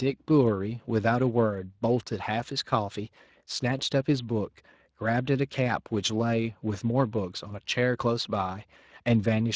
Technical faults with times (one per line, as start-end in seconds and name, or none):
0.00-9.55 Speex codec